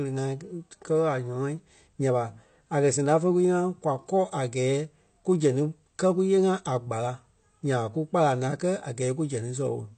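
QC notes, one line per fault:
Throughout, AAC compression: nothing above 8.5 kHz, so the speech sounds dull, with smeared sibilants and a warbling, fizzy texture on sustained sounds. This is likely AAC-LC coding at a low bitrate, consistent with about 32 kbps, which lowers the cut-off and thins the spectrum.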